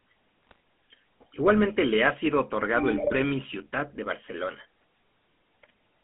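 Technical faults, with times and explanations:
throughout  GSM full-rate codec: The speech has a buzzy, gravelly roughness because the coder rebuilds the voice from a vocal-tract model driven by a coarse, regularly spaced pulse excitation. Nothing sits above about 3.4 kHz or below about 200 Hz, so the band is the narrow telephone range. The damage is plainly audible and fits the 13 kbps full-rate coder. This grain persists steadily throughout and does not break into separate bursts, which distinguishes it from the bit errors.
0.47–0.56 s and 2.94–3.13 s  GSM bit errors: The voice suddenly breaks into squawks, pops and gargling, the first time briefly and the second for about 0.19 s. Corrupted filter, pitch and gain values reached the decoder, so each affected frame came out with a bent spectrum or a jump in level. The sound points to roughly one or two percent of bits flipped. These faults are short, erratic bursts set against the steady codec buzz, not a constant texture.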